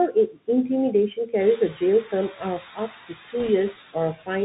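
Throughout the speech, the Bluetooth CVSD headset codec removes everything above 4 kHz and lays a granular hiss under the speech. Its s sounds turn scratchy, a coarse, step-limited roughness rather than a blocky frame-based codec smear. Noise suppressor artifacts are also present the whole time. The background is pulled down by about 7 dB between phrases and swells back under speech, leaving a residue that differs from steady room hiss. The room noise rises by about 11 dB near 1.5 s.

From 0.08 to 0.49 s, the suppressor cuts speech it mistook for noise, dropping it by up to about 13 dB. Soft sounds are swallowed rather than clipped or muted outright. The same speech cut by the noise suppressor returns at 1.14 to 1.33 s, up to about 9 dB, and at 1.57 to 1.82 s, up to about 12 dB. Each time, the affected speech sounds swallowed or faint.

At 3.39 to 3.50 s, bit errors on the Bluetooth voice link, at a rate of around 2 percent, add a brief rushing crackle. 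There are no sharp clicks, because each flipped bit only nudges the signal.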